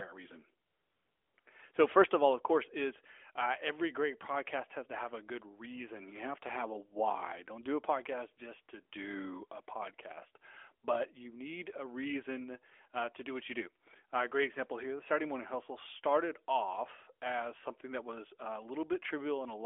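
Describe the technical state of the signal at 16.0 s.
At 16.0 s the speech is intact, with no fault at that point beyond the narrowband telephone-band character of the AMR narrowband mobile codec path it passes through.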